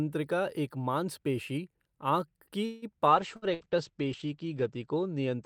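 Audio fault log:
2.65–2.85 s, call audio freeze: right after "एक मांसपेशी आँख" the sound stretches into a fading buzz or hiss for about 170 ms, then continues where it stopped with nothing lost. This likely comes from delayed packets draining the jitter buffer, so the concealment fills the wait and adds about 170 ms of delay.
3.11 s to end of clip, call bitrate drop: the sound turns rough and muffled as the encoder falls from 48 to 13 kbps and its audio bandwidth narrows from 20 kHz to 8 kHz. The lowest rate holds for about 1.7 s, and the missing top end makes the sound dull.
3.36–3.45 s and 3.54–3.63 s, burst of packet loss: two short gaps where about 60 ms of audio is missing each time. The receiver extends the last sound for about 58 ms as a decaying buzz or hiss, then jumps ahead, so each burst sounds like a brief stutter with a small piece skipped.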